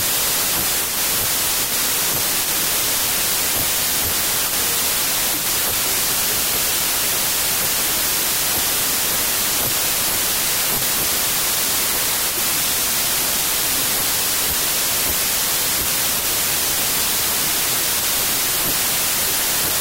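From start to finish the speech sits buried under loud, harsh noise, slowed to 0.75 times its speed with pitch dropped to match. This is a wrong sample width fault: 32-bit integer data read as packed 24-bit, splicing mismatched bytes into most samples.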